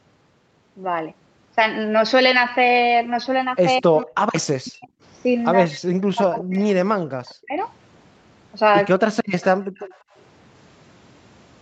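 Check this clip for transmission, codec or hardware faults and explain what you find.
The clip is speech carrying three kinds of fault typical of a hands-free call: speech suppressed in double talk, echo leak, and background gated by the echo canceller.

Speech suppressed in double talk occurs from 3.79 to 4.19 s, from 4.37 to 4.92 s, and over a longer stretch from 5.66 to 7.56 s. The voice is pushed down hard, by roughly 40 dB at its deepest, so it fades and breaks into pieces. The likely cause is the echo canceller reacting while both ends spoke at once: unable to tell the local talker from the loudspeaker return, it attenuated everything.

Echo leak shows as a faint delayed copy of the voice arriving about 194 ms behind the original. The first scrap is from 6.39 to 6.44 s, inside the suppressed stretch. Two more come from 9.41 to 9.45 s and from 9.75 to 9.98 s. They sit roughly 15 to 25 dB below the speech and are short and fragmentary. 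The likely cause is residual loudspeaker sound picked up by the microphone that the canceller did not fully subtract.

Background gated by the echo canceller appears from 9.59 to 9.75 s and from 9.98 to 10.15 s. The room tone drops out for about 150 ms each time, by about 40 dB and then about 24 dB, and returns. The canceller clamped the microphone while the loudspeaker was active, and the gaps bracket the last echo scrap. The call microphone processing also limits the audio to nothing above 8 kHz, which is expected for this kind of path.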